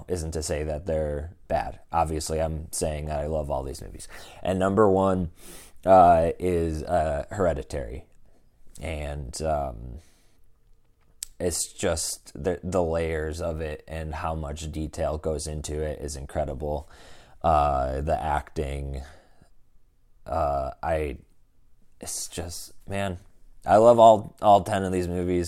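Damaged compressed data reached the decoder twice and was played rather than concealed. Each time it was a corrupt frame decoded: flipped bits scrambled gains and spectral codes, so energy landed at the wrong frequencies. At 3.06 s, after "I'm saying" and before "that I love all", a short chirp-like blip peaks at about -30 dBFS, which suggests a single damaged frame. At 6.87 s, right after "number one uh is", a fainter burst near -45 dBFS points to roughly two affected frames.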